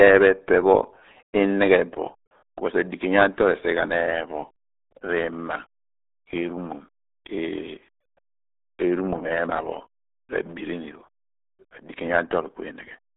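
From start to end, the speech carries the damage of the RealAudio 14.4 codec. The sound points to a very low bitrate, which fits an 8 kbit/s stream built for dial-up modems. The band is squeezed to roughly 250 Hz to 3.7 kHz. Nothing passes above 3.8 kHz. Sibilants and air are gone. The coder damage is heavy. Speech sounds muffled, gargly and thin, with a wet, bubbling texture.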